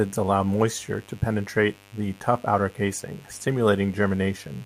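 A steady, raspy mains buzz runs under this speech from start to finish, sitting roughly 30 dB below the voice. It is built on 50 Hz with sharp harmonics climbing into the kilohertz range, so it rasps rather than hums, unlike a smooth, low hum with few harmonics.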